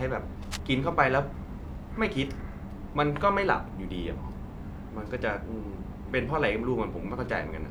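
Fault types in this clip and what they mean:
Cable scratch noise: A short burst of dense, uneven scratching sits over the speech from 0.43 to 0.60 s, roughly 10 dB below it. The likely cause is a worn cable or connector being moved. Its contact resistance then flickers rapidly, letting ragged noise into the signal.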